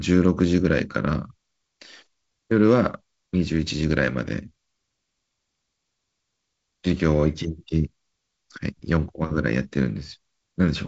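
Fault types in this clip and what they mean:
Nothing's wrong here; the speech simply comes across as wideband telephone audio, G.722 at 48 kbit/s, with a light hiss in the upper band and nothing much above about 7.7 kHz.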